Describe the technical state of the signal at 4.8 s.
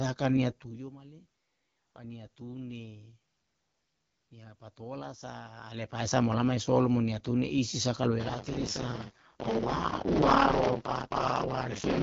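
At 4.8 s the speech is coming through the AMR wideband (HD Voice) codec, and that holds for the whole clip. It sounds rough and raspy, which points to one of the two lowest modes, around 8.85 kbit/s, where the pulse-driven vocal tract model runs short of bits. Nothing reaches past about 7.1 kHz, since only the band up to 6.4 kHz is actually coded and the top slice is filled with shaped noise.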